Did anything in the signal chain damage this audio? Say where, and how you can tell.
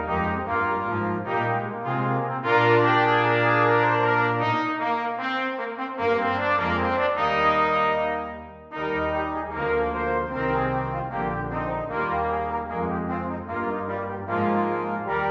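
No, nothing in the signal chain damaged this audio that I can hear.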